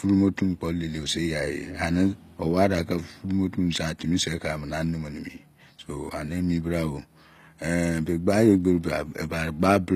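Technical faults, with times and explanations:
Throughout, HE-AAC compression: the speech carries plainly audible codec damage, with nothing above 14.9 kHz, and the treble has a grainy, metallic edge, especially on s sounds. This is likely spectral band replication at work: only the lower spectrum is truly coded, and the upper range is filled by copying lower bands upward under a coarse envelope, so the top end is bright but mismatched. The degree of damage fits a bitrate around 24 kbps.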